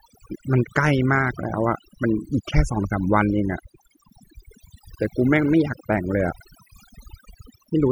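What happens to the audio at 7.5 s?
Overdone noise removal is present at 7.5 s, as it is across the whole clip. Frequency bands sitting near the estimated noise level are pushed far down or muted, taking quieter parts of the speech with them, so the background drops and breaks up into twinkling, warbling specks.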